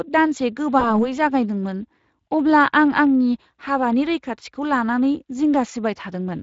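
From the start the speech sounds hoarse and grainy, with plainly audible damage from the Speex codec, whose CELP coding fits a bitrate near 20 kbps. At 0.79 s the sound is stretched and fades until 1.11 s. This is VoIP packet loss concealed by the speech codec, fitting one lost 20 ms frame.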